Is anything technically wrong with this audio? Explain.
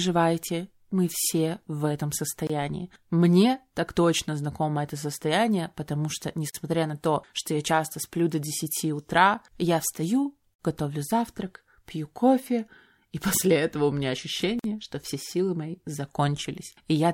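Yes. There are gaps at the joins of encoded pieces. Short silences open in continuous speech at 2.47, 6.50, 10.54 and 14.59 seconds, one every 4.0 seconds. The first lasts about 25 ms. The other three last about 49 ms. Each edge is smeared. The speech then picks up exactly where it stopped. The regular spacing suggests 4-second pieces encoded separately and joined untrimmed, leaving encoder start delay and end padding in place.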